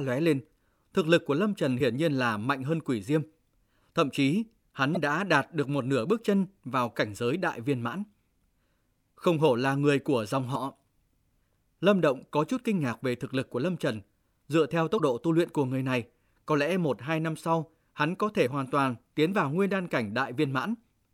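Damaged data in the compressed stream causes brief glitches at 1.77–1.81, 4.93–4.97, 10.52–10.56, 14.96–15.00 and 18.43–18.48 s, where the decoder misreads corrupted frames and resynchronises on the next header.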